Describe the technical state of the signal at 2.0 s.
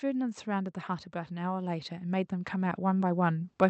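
At 2.0 s the signal is midway through an automatic gain rise running from 0.05 to 3.59 s. The gain control, treating the input as too quiet, keeps raising its gain by about 13 dB in total, so the speech and the background swell together steadily.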